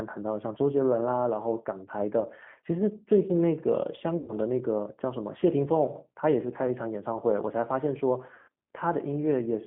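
Speech coded with G.729 throughout, and the coding damage is plainly audible. The rough, slightly synthetic texture fits an 8 kbit/s codec that rebuilds the voice from a vocal tract filter, a pitch predictor and a few pulses per frame rather than sending the waveform itself. The band runs only from about 150 Hz to 3.4 kHz, so a spectrogram shows a hard ceiling near 3.4 kHz with nothing above it and smeared, blocky harmonics below. The second fault is VoIP packet loss concealed by the speech codec, at 4.18–4.33 s and 8.34–8.49 s. Roughly 100 ms of audio is missing in the first gap and 140 ms in the second. In each gap the decoder keeps repeating its last pitch and filter at falling gain, so the speech is stretched into a buzzy tone or a coloured noise that fades. The waveform shows a steadily decaying stretch. The voice also stays weak for a short while after each gap ends, because every new frame is predicted from the damaged one before it.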